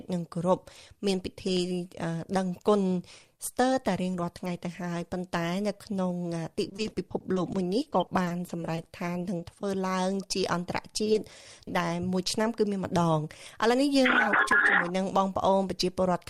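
At 1.57 s and 14.52 s there is a tiny forward jump in the sound. The likely cause is a dropped buffer (overrun): a few milliseconds of samples were overwritten before the program read them, and the audio on either side was butted together. Nothing was patched in and there is no silence, so what you hear is a hard splice. That sets it apart from packet loss, where the missing stretch is filled with synthesized sound. From 6.69 s to 9.64 s there is repeated packet loss, and the audio takes on a choppy, robotic quality. There are roughly two dozen separate holes, the longest about 40 ms, adding up to around 400 ms of missing audio. The receiver covered about 490 ms by extending the preceding sound, so roughly 17% of that stretch is concealment rather than real signal. This is a sustained texture, not a one-off glitch. At 11.04 s to 11.08 s and again at 11.12 s to 11.16 s, two brief smears mark short concealed packet loss. 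Each one replaces 20 ms of lost audio with a continuation of the last sound before blending back. Each is a single isolated wobble rather than a run of dropouts, and there is no click, because the gap was filled instead of spliced.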